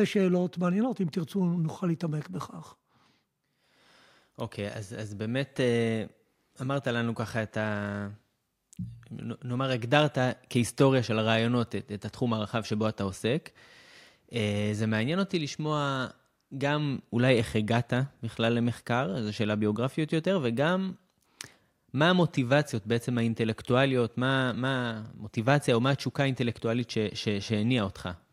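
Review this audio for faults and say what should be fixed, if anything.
Nothing in this speech recording needs fixing. No faults can be heard anywhere in it.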